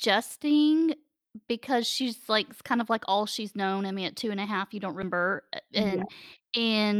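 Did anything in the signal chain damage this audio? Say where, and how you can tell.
Yes, a CD skip at playback, at 5.02 s in the speech. There's a brief mute of just a few milliseconds, then the sound resumes from a different spot. The laser has jumped to another turn of the disc's spiral, so the player lost its place.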